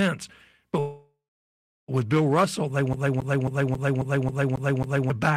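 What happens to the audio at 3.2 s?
At 3.2 s the speech is caught in a CD stuck on one turn, lasting from 2.93 to 5.10 s. A scratch keeps throwing the laser back one track. The same 0.27 s fragment repeats eight times, each jump marked by a brief mute, giving a fast, even stutter.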